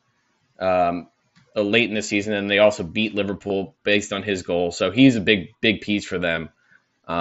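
At 3.48–3.50 s and 6.36 s, concealed Bluetooth headset packet loss fills dropped packets by repeating recent waveform. The run at 3.48–3.50 s is heard as a brief buzz, while the single loss at 6.36 s is nearly hidden, and the loss shows as a copied cycle on the waveform and flat, smeared harmonics on the spectrogram.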